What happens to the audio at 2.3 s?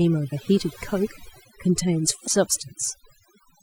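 Between 2.23 and 2.28 s, about 50 ms, there is damaged data in the compressed stream. Some of the encoded bytes at that point are wrong, so the decoder cannot read those frames correctly. It loses its place in the stream and has to search forward for a valid frame header before decoding can resume. The result is a brief, garbled blip.

Overdone noise removal is also present at this moment, and it runs through the whole clip. The noise reduction is set so aggressively that any frequency band close to its noise estimate is pulled down hard or muted entirely. That strips out the quieter parts of the voice along with the noise. The background drops and breaks up into twinkling, warbling specks.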